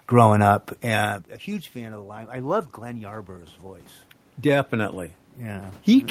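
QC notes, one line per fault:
0.85–6.1 s, automatic gain rising: the voice and room noise swell together gradually to the end. The talker moves away at around one second, dropping the input by about 20 dB, and the automatic gain control slowly raises its gain to compensate.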